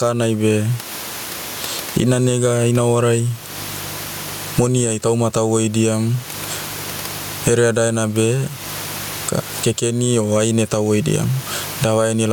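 Gain pumping runs throughout the speech, likely from gain set far too high with a fast limiter clamping each loud syllable. The gain swings roughly 20 dB, squashing loud and soft parts closer in level, with room noise sitting about 33 dB below the speech, and the waveform shows an evened-out envelope.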